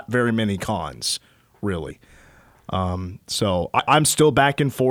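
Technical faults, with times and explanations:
1.90 s and 3.79 s, compressed frames skipped: the decoder either didn't receive or discarded about two compressed frames each time, consistent with 32 ms frames. Roughly 70 ms of speech vanishes, and the audio jumps ahead at the join.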